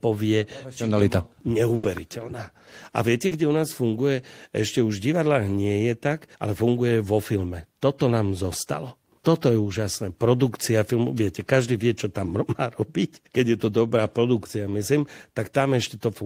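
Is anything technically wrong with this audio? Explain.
Yes, the speech has two packet-loss faults. At 1.75 to 1.86 s, a burst of packet loss drops about 80 ms; the receiver extends and fades the last sound, seen as a smeared, decaying patch before an abrupt restart. At 3.27 to 3.34 s, short concealed packet loss fills about 40 ms with synthesized continuation, heard as a brief smear and seen as a blurred spectrogram patch.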